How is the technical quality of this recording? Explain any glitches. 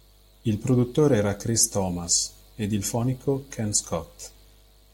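One short glitch interrupts the speech near the end. From 4.24 to 4.26 s there is a brief chirp, blip or burst of noise, a burst of stray energy peaking at around -25 dBFS. It is a corrupt frame decoded: flipped bits in what sounds like a single compressed frame were decoded anyway, putting sound at the wrong frequencies for that frame's length.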